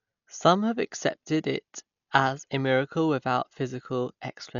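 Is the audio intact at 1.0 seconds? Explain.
No. At 1.0 seconds the speech carries heavy damage that runs through the whole clip, likely from Dolby Digital compression at a very low bitrate near 48 kbps. With too few bits, the encoder narrows the band and gives many frequency lines no mantissa bits, which the decoder fills with dither noise, so the speech sounds dull with rough, fluttering noise around tones. On a spectrogram, energy stops at a flat ceiling near 6.9 kHz and the harmonics look speckled.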